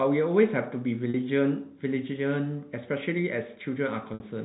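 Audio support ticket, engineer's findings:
Packet loss with pitch repetition, 1.10–1.14 s: roughly 40 ms dropped out, heard as a short held, buzzy tone. The receiver's concealment is looping the last pitch period to bridge the hole. Fits two 20 ms packets lost.

Same deal at 4.14–4.20 s: 60 ms gone, fits three packets. The repeated period fades out over about 50 ms, so this one sags toward silence before a quick cross-fade back into the speech. The G.711 narrowband path carries it, with no audible codec grit of its own.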